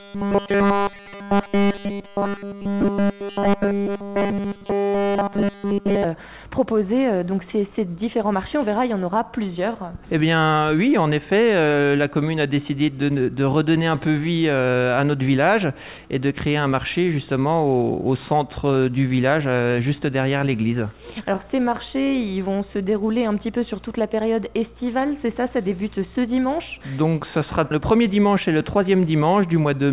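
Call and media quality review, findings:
Robotic sound from repeated short buffers, 0.0 to 6.0 s. Rigid metallic buzz at 200 Hz across the whole stretch, sound only roughly tracked. Likely cause: buffer starvation, with the playout repeating a 5 ms block so the repeat rate sets the pitch.

Scattered short gaps, 19.08 to 20.42 s. About seven brief ticks and smears, roughly 70 ms concealed in total, longest around 15 ms. Late or lost packets, with each hole patched by extending the last sound, so nothing is dropped.

Repeated stalls (stutter), 20.92 to 21.40 s. Four short hangs totalling 37 ms, longest 14 ms, no audio lost. The jitter buffer ran dry repeatedly, and the receiver extended the last sound until new packets arrived, giving a dragging stutter.

Jitter buffer slow-down, 21.43 to 23.15 s. Playback at 94% speed, pitch unchanged, sounds drawn out. The receiver rebuilt its reserve by repeating pitch periods and pause fragments, adding 102 ms.

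Jitter buffer speed-up, 25.10 to 26.28 s. Playback at 110% speed, pitch unchanged, hurried feel. The buffer held excess delay, and the receiver trimmed short pitch-period segments, about 150 ms removed in total.

Call path band-limited to 4 kHz with codec noise, which fits G.711 A-law at 64 kbps.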